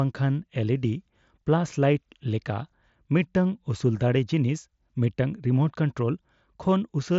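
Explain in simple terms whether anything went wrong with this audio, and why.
Nothing went wrong with this audio; the speech simply comes through a Bluetooth headset link that is working as it should.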